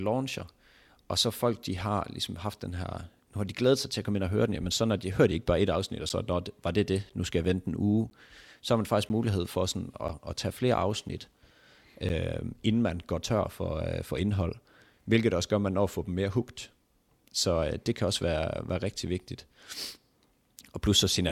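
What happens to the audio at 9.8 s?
At 9.8 s the speech sits inside a run of periodic USB or driver dropouts lasting from 6.09 s to 12.10 s. Once every 1.0 s a blocked driver drops roughly 10 ms of audio and fills it with silence, producing regular ticks. The waveform shows thin flat gaps, and the spectrogram shows evenly spaced vertical broadband lines.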